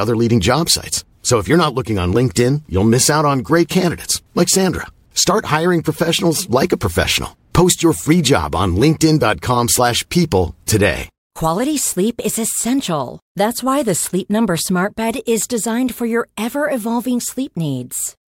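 No technical faults can be heard anywhere in the recording. There is nothing to locate or describe at any point in it.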